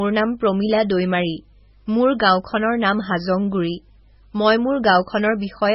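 Heavy MP3 compression runs throughout this speech, with nothing above 5.6 kHz; the swirly, watery texture and smeared attacks point to a likely very low bitrate, around 16 kbps.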